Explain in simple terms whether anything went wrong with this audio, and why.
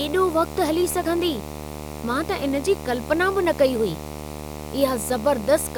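Yes, a video or display buzz runs under the speech for the whole clip, fairly loud beside the talking. A screen or its cable is leaking into the audio, giving a 75 Hz buzz with hash above it. Mains hum would sit at 50 or 60 Hz instead.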